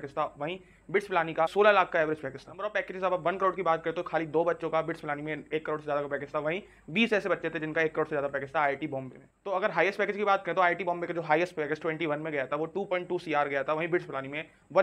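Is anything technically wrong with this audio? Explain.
No, nothing in this audio points to a technical fault.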